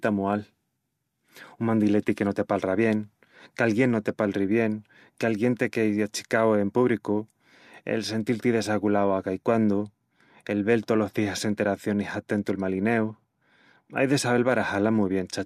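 Speech recording, no technical faults.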